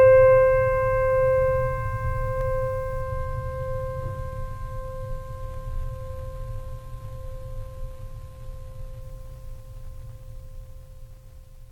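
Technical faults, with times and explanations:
2.41 s and 8.11 s, dropped samples: Two single sharp clicks cut through the music. Each is a brief tick with no break in the sound. The likely cause is a tiny run of missing samples, a small fraction of a millisecond each time. The waveform jumps straight from one value to a later one. That step is a sudden discontinuity. It spreads energy across all frequencies at once, so it is heard as a click.
3.01 s to 9.01 s, adaptive stream at a lower bitrate: For six seconds the music loses quality abruptly, with no gap. Codec artefacts become more audible. The change points to a switch from a full AAC stream near 96 kbit/s to a low-rate HE-AAC version around 20 kbit/s, as the connection slowed. At 9.01 s full quality returns just as suddenly.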